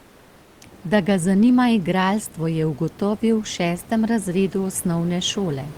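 Speech clip, and the first 0.61 s is comfort noise in place of the background: a flat, featureless hiss about 3 dB quieter than the real room noise that follows, likely from Opus discontinuous transmission filling the pause before talking starts.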